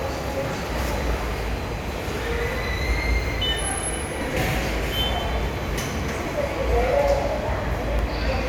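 From 5.00 s to 7.99 s the audio has periodic USB or driver dropouts. Brief gaps recur once per second, about four of them, each a sub-millisecond loss of around half a millisecond that is replaced by silence. Each gap is heard as an evenly spaced tick in the sound. The regular one-second spacing points to a background task that blocks the USB bus or audio driver on a fixed schedule, so the stream misses its deadline.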